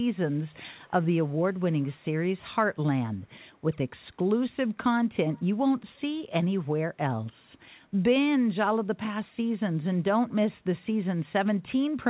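Echo leak at 0.28–0.57 s, 0.75–1.07 s, 1.52–1.62 s, 1.81–2.05 s and 5.34–5.43 s in this speech, carried over a call line that has nothing above 4 kHz. A faint copy trails the speech by 293 ms, roughly 30 to 40 dB down. This is likely a far-end loudspeaker whose echo canceller let its microphone pickup return.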